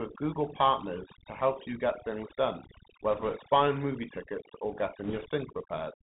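Overdone noise removal runs through the whole clip. Frequency bands near the noise estimate are pushed almost to nothing, so pauses fall to near silence with twinkling specks.

The Bluetooth CVSD headset codec is also present throughout. Nothing above 4 kHz survives, s sounds turn scratchy, and a granular hiss lies under the speech. The one-bit up-or-down coding fits a 64 kbps headset link.

Bit errors on a Bluetooth voice link appear from 3.11 to 3.36 s, between "you get things done" and "buying movie tickets". At an error rate around 2 percent, the flipped bits add a rushing crackle rather than loud clicks.

The same bit errors on a Bluetooth voice link return from 5.04 to 5.26 s. The error rate rises to around 3 percent, and the crackling hiss is denser than in the earlier burst.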